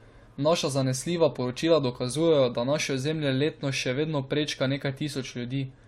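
A speech clip with layered lossy-codec artefacts throughout, likely from transcoding between lossy codecs: the sound points to a low-rate MP3 stage around 59 kbit/s re-encoded as AAC-LC near 64 kbit/s. A spectrogram shows a hard ceiling at 16 kHz, with smeared, blotchy high-band detail where both codecs' artefacts stack.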